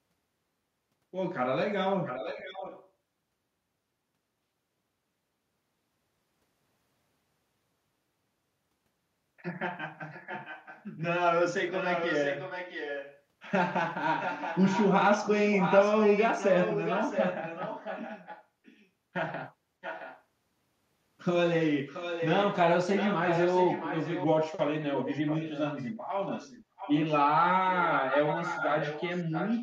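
Echo leak recurs at 2.06–2.9 s, 10.1–11.03 s, 11.72–13.21 s, 14.19–18.87 s, 19.81–20.23 s, 21.87–24.26 s and from 24.81 s to the end. A copy of the speech returns 670 ms late, faint to fairly strong, likely from a far-end echo canceller failing. Its fixed lag sets it apart from room reverberation.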